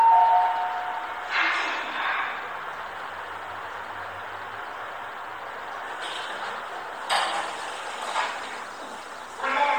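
No technical faults can be heard anywhere in this recording of sounds. There is nothing here that calls for a timestamp or an explanation.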